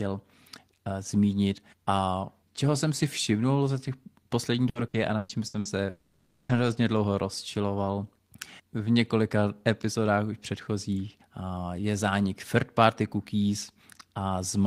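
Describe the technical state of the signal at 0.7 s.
At 0.7 s the signal is intact, with no audible fault at that moment.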